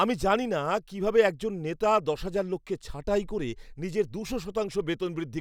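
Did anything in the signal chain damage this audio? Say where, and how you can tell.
No, nothing in the signal chain has audibly damaged this speech clip. No stage, from capture through to playback, leaves any mark that a careful listen can pick out.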